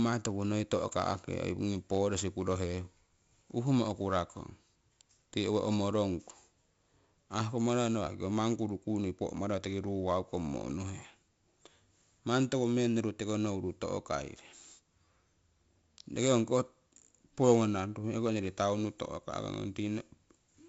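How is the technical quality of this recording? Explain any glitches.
The technical quality is poor. Heavy 4-bit ADPCM compression runs through the whole speech clip. Each sample is coded as a coarse 4-bit step from a predicted value, and the step size adapts as it goes. That leaves a gritty hiss riding on every loud syllable and a rasp on sharp onsets, where the step can't grow fast enough to keep up. Nothing is heard above 7.7 kHz, so the speech also sounds dull, which fits a 64 kbps stream at a reduced sample rate. What separates this from an ordinary background hiss is that this grit rises and falls with the speech and drops away in the pauses. A steady noise floor would stay constant throughout.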